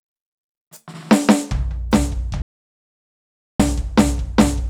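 At 2.42 s the music drops into total silence until 3.60 s, an audio dropout to silence, likely from input lost while recording continued.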